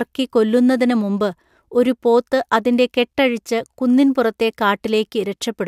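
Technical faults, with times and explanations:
No technical faults can be heard in this speech clip.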